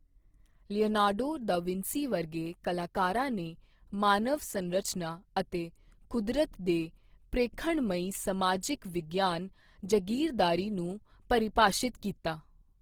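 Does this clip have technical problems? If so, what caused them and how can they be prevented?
Yes. Opus compression runs throughout the whole clip: the speech sounds noisy, rough and grainy, with plainly audible damage. The likely cause is Opus in its music mode at a low bitrate, which points to roughly 16 kbps. With too few bits, the encoder keeps each band's energy but refills the fine detail with folded or noise-like content, so tones turn gritty rather than swirling. The audio still reaches about 20.4 kHz. Encoding speech at a higher bitrate, or letting the encoder use its speech-optimised mode, would prevent this.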